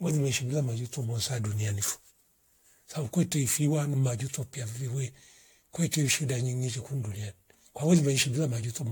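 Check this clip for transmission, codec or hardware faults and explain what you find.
One codec fault runs through the whole speech clip. Generation loss likely from about five repeated AAC encodes, consistent with 96 kbit/s, leaves swirly, hollow, smeared speech, blurred attacks, and nothing above 18.7 kHz.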